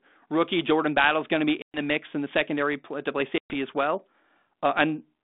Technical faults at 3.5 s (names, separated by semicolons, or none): packet loss on an ADPCM call